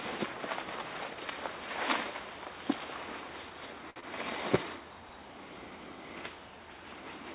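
At 3.90 s there's a short stall from a late packet, lasting until about 3.98 s. A packet didn't show up on time, the jitter buffer drained, and the receiver held the last sound for 59 ms until it arrived, then picked up right where it left off. Nothing gets skipped, but that moment hangs a beat too long, with a faint buzzy, slightly dipped quality. The playout delay grew by 59 ms here.

Right after, from 4.00 to 4.04 s, comes a short concealed packet loss. This time 40 ms of audio never made it to the decoder in time. The receiver patched 23 ms of it by extending the preceding sound, then blended back into real audio, which trimmed the delay by roughly 15 ms. You hear it as a quick smear or wobble, with a sliver of content simply gone. Both sit on top of the narrow call path, which cuts everything above 4 kHz and fits G.711 mu-law coding.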